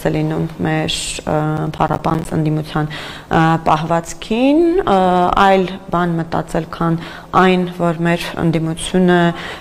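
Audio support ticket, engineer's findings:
Processor overload crackle, 1.57 to 2.25 s. Gritty tearing over the sound, clears once the load drops. CPU is missing its deadlines on small buffers, each gap sounding like about 10 ms. Roughly fifteen missed across the stretch, each dropping to silence with hard edges. Check what spikes the processor there.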